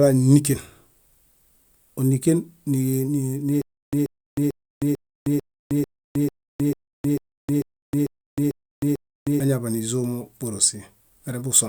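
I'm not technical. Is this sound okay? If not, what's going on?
No, not quite. From about 3.62 to 9.4 seconds the speech hits a stutter with silent gaps. A tiny snippet, about 0.13 seconds long, plays, then dead silence for about 0.31 seconds, and that same snippet comes back 13 times at a steady beat. What's likely happening is the player stalled and kept replaying its last bit of sound each time it retried. The speech that belonged in that stretch is simply missing.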